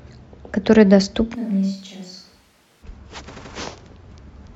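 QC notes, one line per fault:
1.37–2.81 s, switch to a distant microphone: the speech suddenly goes roomy and hollow, thinner in the bass and about 10 dB quieter, with room noise creeping up to roughly 35 dB under the speech. It likely dropped to a far-off backup mic, then snaps back.
3.34–3.51 s, repeated frames: a short stutter where an 85.3 ms chunk gets played twice more, so the same slice comes around again. Someone resent or rewrote those compressed frames, stretching the clip by about 0.17 s.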